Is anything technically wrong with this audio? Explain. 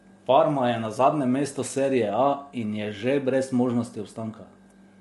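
Yes. Throughout, the speech was likely passed through low-delay AAC compression at a low rate, fitting about 32 kbps, leaving it rough and grainy, with noise between harmonics and nothing above 11.6 kHz.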